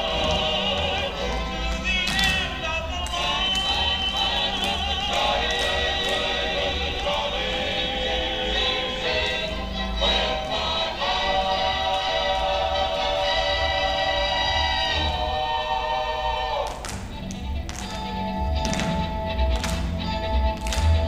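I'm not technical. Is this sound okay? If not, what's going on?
Yes, it's fine: nothing in this recording jumps out as a glitch, dropout or distortion, so there's nothing to worry about here.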